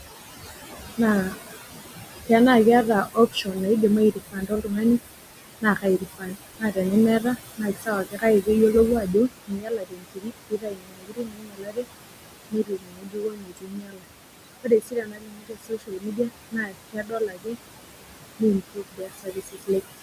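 Noise suppressor artifacts run through the whole clip. The suppressor pulls the steady background down by about 20 dB, leaving a residue under the speech. The room noise sits about 10 dB below the voice and pumps with the processing. Speech cut by the noise suppressor comes first at 0.97 to 1.52 s, then at 3.06 to 3.57 s, then across 4.12 to 11.87 s and 12.51 to 19.7 s. The suppressor mistakes quiet speech for noise and drops it by up to about 22 dB. Soft sounds and word endings turn faint or vanish. The early cuts are brief, around a tenth of a second and a third of a second. The long stretches lose several seconds of speech in total.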